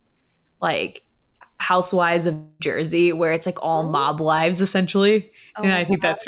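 A speech clip with a likely long network dropout from 2.33 to 2.62 s. For about 0.26 s the sound turns into a smeared, fading buzz as the receiver stretches the last audio across the gap. It never falls to silence. Speech resumes afterwards with that stretch missing. Throughout, nothing is heard above 4 kHz, which fits a G.711 A-law call codec.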